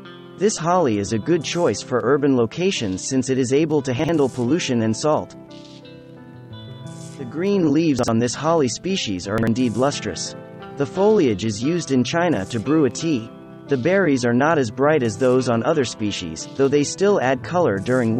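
Brief jumbled moments at 3.99–4.09 s, 7.99–8.08 s and 9.38–9.47 s are chunks out of order: each time, one 46 ms chunk plays a chunk late, swapping places with its neighbour.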